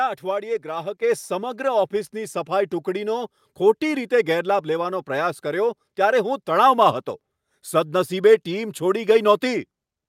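Right around 1.02 s there's a microphone volume stepped up moment: the whole level jumps by about 6 dB in one go. What's happening is the call software decided the mic was coming in too quiet and bumped the device's input gain in a single step rather than easing it up. You hear it as the speech and the room background both getting noticeably louder at the same instant, a clean step with no ramp.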